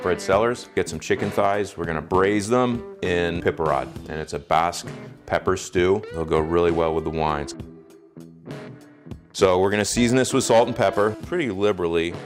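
Nothing in the audio points to a technical fault; there's nothing here that signals a problem in how it was captured or passed along.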